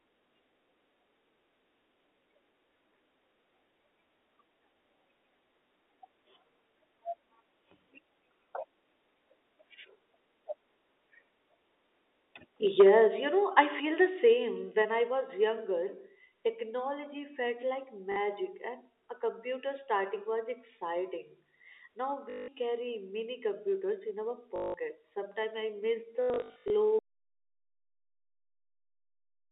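At 12.67 s the loudest part of the sound goes harsh and crackly until 12.9 s. This is microphone overload. The peaks run about 5 dB past the converter's limit. Their tops get sliced flat, and a small share of the samples is clipped. The likely cause is an input volume set too high. The flattened waveform brings in jagged harmonics, which gives that gritty edge.

At 12.81 s, in the middle of that distorted peak, the level drops suddenly by about 3 dB. It drops again by about 5 dB at 13.8 s and by about 3 dB at 14.82 s. This is the microphone volume stepped down. The call software likely heard the clipping and cut the device gain in steps. The sound and the background fall together each time. That is why each drop sounds like a clean, sudden step.

Next comes packet loss with the last packet repeated. A 40 ms gap at 18.12 s fits 20 ms packets. Longer runs follow at 22.3 to 22.48 s and at 24.56 to 24.74 s, each about 180 ms. 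A scattered cluster runs from 26.22 to 26.7 s, with 340 ms lost in total and a longest run of 80 ms. The receiver loops the last packet to fill each gap. The loops seldom line up with the pitch. The longer runs buzz at about 50 Hz, like a robotic stutter.

At 26.99 s the sound cuts out to complete silence and stays silent to the end. This is an audio dropout to silence. The room tone vanishes along with the sound. That points to silence being written, likely because the input device or link was lost. Anything after that moment is gone. The telephone band of 300 Hz to 3.7 kHz can still be heard before the cut.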